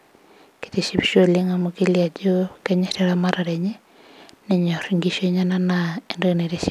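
Speech, with no audible technical faults anywhere in the recording.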